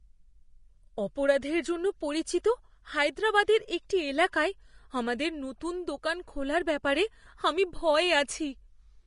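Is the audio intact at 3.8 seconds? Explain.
No. At 3.8 seconds, as everywhere else in this speech, you're hearing Vorbis compression, likely pushed hard. Nothing gets through above about 10.6 kHz, and what's left of the treble has been quantised so coarsely that the fine detail turns into hiss of roughly the same energy. So the top end sounds grainy, tones come out roughened and attacks are smeared. The damage is plainly audible and points to a low bitrate around 32 kbps.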